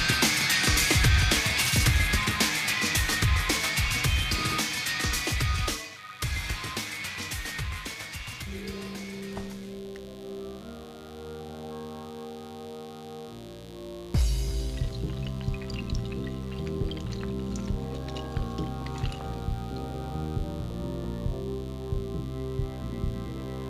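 From the very start to the end there's a mains buzz sitting under the sound, about 25 dB below it. Something like a dimmer or an unshielded lead is letting spiky 50 Hz interference through, so harmonics climb well into the kilohertz range and you hear a constant raspy buzz.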